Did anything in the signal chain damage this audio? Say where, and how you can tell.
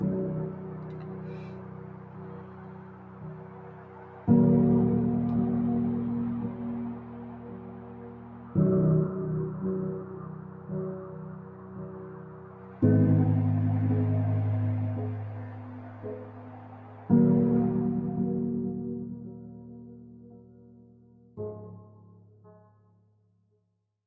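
Yes, at the call-processing stage: a speech-tuned noise suppressor applied to music or sounds, throughout. Attacks pass, but sustained tones and tails sink by around 10 dB and pump, flutter or thin out. Unlike compressor pumping, the dips track steadiness rather than loudness, so held material erodes.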